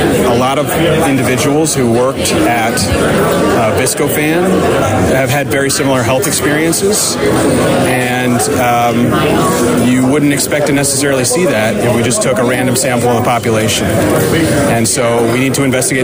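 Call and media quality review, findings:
Nothing to flag on this one: no audible faults anywhere in the recording, so no ticket items needed.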